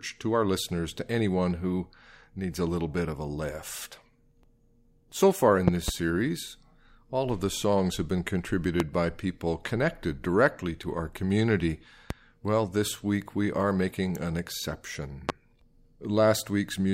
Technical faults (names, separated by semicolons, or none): loud pop